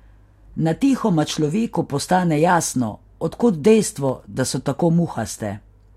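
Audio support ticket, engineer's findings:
Dropped samples, 4.09 s: likely a handful of samples lost in the stream, waveform jumping ahead a fraction of a millisecond. Single sharp click in the speech.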